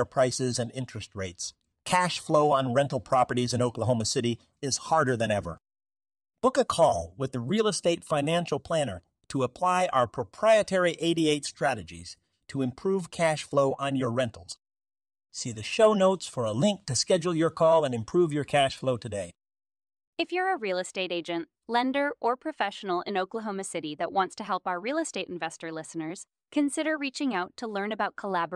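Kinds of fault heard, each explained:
No faults heard in this recording.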